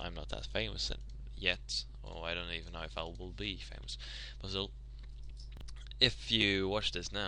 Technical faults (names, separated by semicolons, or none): chunks out of order